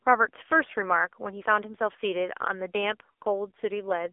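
Throughout, the speech has passed through an AMR narrowband mobile codec at a low rate, which fits a mode of about 6.7 kbps. Nothing reaches above 3.7 kHz and the band sits near 300 Hz to 3.6 kHz, leaving a thin, heavily buzzy, synthetic voice.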